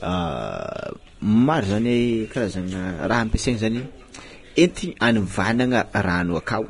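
Heavy Vorbis compression runs through the whole speech clip. Nothing is left above 10.6 kHz. The treble sounds hissy and grainy, and consonant attacks blur. The likely cause is coarse quantisation at a low bitrate, which fits around 31 kbps.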